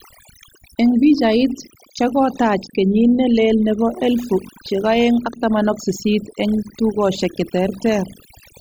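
Throughout, overdone noise removal has gutted near-noise frequency bands: twinkling specks replace the background noise, unlike a noise gate's whole-signal pumping.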